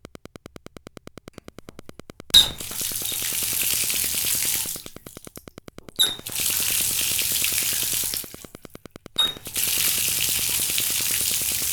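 Wi-Fi interference runs throughout: a nearby radio's beacon, every 102.4 ms, is rectified by the audio circuit into steady ticking about ten times a second, roughly 20 dB below the sound. A spectrogram shows evenly spaced thin vertical broadband lines; the waveform shows regular small spikes.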